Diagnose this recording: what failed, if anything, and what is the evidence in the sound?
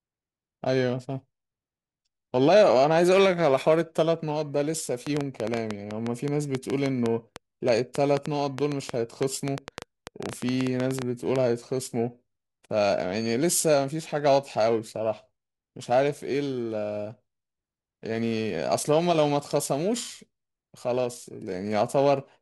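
Periodic clock jitter at the converter, all the way through: the speech has a rough, metallic edge that drops out in pauses, from the clock wobbling at around 2 kHz.

A train of clicks from 5.07 to 11.37 s, about forty irregular ticks at 6.7 per second, peaking roughly 15 dB over the speech, likely interference pickup or a faulty connection.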